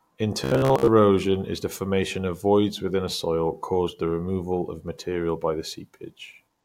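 A speech clip in which, from 0.44 to 0.88 s, just before "is the formation of", the voice collapses into a rigid, metallic buzz pitched at about 66.7 Hz, loosely tracking the words. This is robotic sound from repeated short buffers. The likely cause is audio arriving too seldom, so the playback side keeps looping the last 15 ms or so for most of that stretch while the real audio is skipped, and that loop length sets the buzz pitch.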